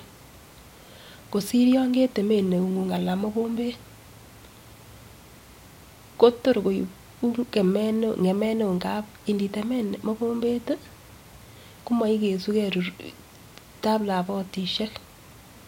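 No technical faults are audible anywhere in the speech recording.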